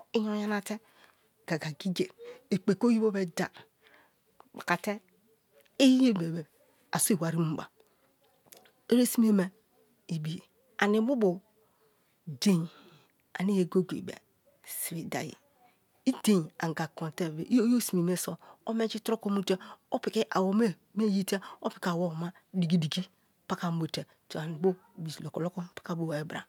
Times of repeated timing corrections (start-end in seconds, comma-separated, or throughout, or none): none